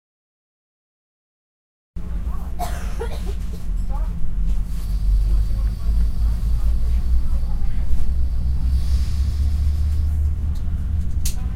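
For the first 1.96 s there is nothing but digital silence, and then the audio begins abruptly in the middle of a sound. This is a cut-off start: capture began late, so the onset of whatever was already sounding was never recorded. There is no natural attack or fade-in, just a hard jump from silence into sound. On a waveform this looks like a flat line ending in a vertical edge at 1.96 s. A spectrogram shows empty black up to that point, then energy appearing across its bands at once.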